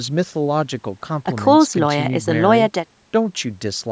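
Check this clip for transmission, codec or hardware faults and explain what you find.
Nothing stood out on listening to this speech clip; the low-end roll-off and the absence of content above 8 kHz are just what ordinary call microphone processing leaves behind.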